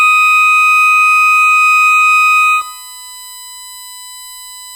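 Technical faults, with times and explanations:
throughout USB whine: USB bus current pulses leak into the audio path, adding a fixed-pitch whine at 1 kHz, strongest at 8 kHz, about 20 dB below the music.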